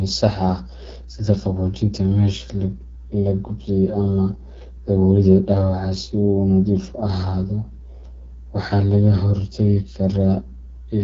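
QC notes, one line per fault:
Throughout, mains hum: a steady 60 Hz tone runs beneath the speech at roughly 20 dB below it. Power-line current is leaking into the signal path, probably through a ground loop or a nearby transformer, so the tone never changes pitch or level.
Throughout, AMR wideband (HD Voice) codec: the speech sounds plainly rough and raspy, and nothing is heard above 7.3 kHz. The codec rebuilds speech from pulses driving a vocal-tract model and pads the top band with shaped noise. That harshness fits a low rate near 8.85 kbit/s.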